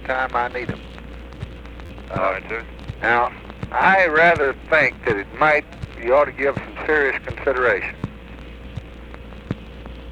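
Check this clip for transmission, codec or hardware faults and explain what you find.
Four brief glitches point to a repeated buffer fault. At 0.53 s and 3.82 s a single click-like tick breaks the sound. From 1.86 to 1.89 s and 7.99 to 8.02 s it's a longer buzzy stutter. Each time, playback ran short of fresh audio and replayed its last block of about 11.6 ms, which fits a 512-sample buffer. There's one replay at the clicks and three at the stutters, with hard joins between them. This drops roughly 10 ms and 40 ms of audio respectively.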